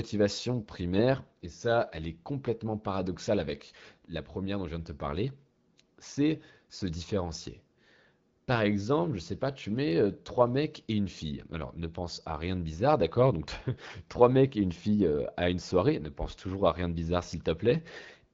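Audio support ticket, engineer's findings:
Nothing to flag here: the speech arrives as a normal AMR wideband (HD Voice) call at 12.65 kbit/s, carrying only the light coding texture that rate gives, and no faults turned up.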